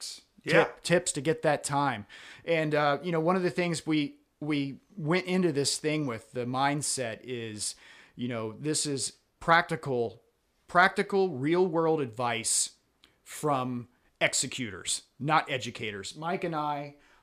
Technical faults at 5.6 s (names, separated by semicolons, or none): none